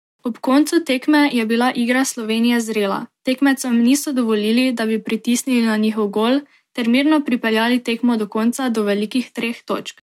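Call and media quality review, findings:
Nothing to flag on this one; the speech came through with no faults heard anywhere along the way.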